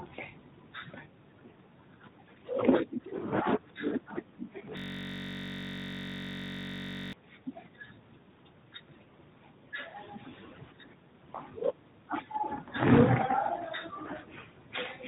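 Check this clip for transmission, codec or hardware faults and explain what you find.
Two faults are audible: a long system hang loop and a brief loss of AMR speech frames. The narrowband band-limit is present throughout, with light AMR colouring at a bitrate that suggests 12.2 kbps.

From 4.77 to 7.13 s there is a system hang loop. The playback side froze while the hardware kept replaying one 21.33 ms slice of its ring buffer, which fits a 1024-sample buffer. It repeated about 110 times and produced a steady buzz at 46.9 Hz. Unlike a codec artefact, the repetition is exact and does not decay.

At 9.90 to 9.96 s, 40 ms of lost AMR speech frames caused the voice to be drawn out. The decoder filled the gap by reusing the last good pitch and vocal-tract settings with falling gain. The result is a drawn-out sound that fades, not an exact mechanical repeat, which is what separates it from the hang loop.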